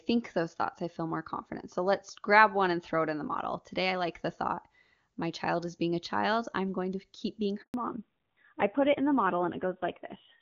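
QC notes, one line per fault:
7.62–7.74 s, handover gap: the speech drops to silence for 120 ms and then resumes. During a handover from one network to another, no speech frames reached the decoder, so the signal fades within a few tens of milliseconds and stays empty until the new link starts carrying audio. Whatever was said in that interval is gone. On a waveform this is a flat, near-zero stretch. On a spectrogram it is a clean vertical blank band across all frequencies.
7.74 s to end, fallback to narrowband: after the gap, the call comes back on an older narrowband codec. The sound fits AMR-NB at a low rate, around 7.4 kbit/s. Before the break, the clear HD Voice band reached well past 6 kHz, consistent with AMR-WB near its top rate. From 7.74 s nothing exists above 4 kHz, so sibilants lose their edge and the speech turns dull and rougher. On a spectrogram, energy ends abruptly at a flat 4 kHz ceiling from this point onward.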